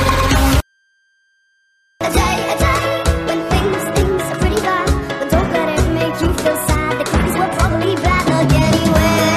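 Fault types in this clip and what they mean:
Switching supply whistle: a faint high whistle sits under the sound for the whole clip, wandering between about 1.57 and 1.6 kHz as the pitch drifts. It comes from a switch-mode power supply whose switching has dropped into an audible burst mode or is beating against another supply, so the load-dependent cycling lands right in hearing range. It's quiet, roughly 45 dB below the main signal.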